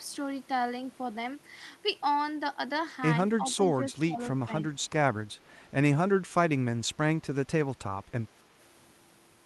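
It's a speech clip with two related problems. From 3.39 to 4.19 s the voice keeps ducking, adding up to about half a second of lost level and dropping about 15 dB at worst. Shorter dips follow at 4.41 to 4.49 s and 4.69 to 4.75 s, and a shallower one of about 10 dB at 6.93 to 6.99 s. That's speech suppressed in double talk: the far end was likely talking too, so the echo canceller couldn't tell this talker from its loudspeaker echo and pulled everything down. On top of that there's echo leak, two faint scraps at 3.50 to 3.54 s and 4.24 to 4.28 s, each a copy of the voice trailing by 275 ms and sitting roughly 25 to 30 dB under the speech. That's most likely a speakerphone's canceller letting some of what its mic picked up slip back down the line.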